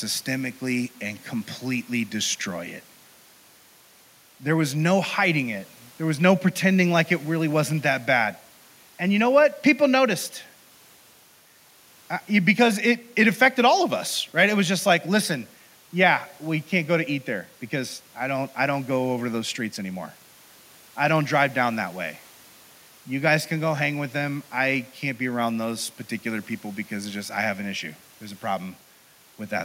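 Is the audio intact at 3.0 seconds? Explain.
Yes, at 3.0 seconds the speech plays through intact, with no audible fault at that moment.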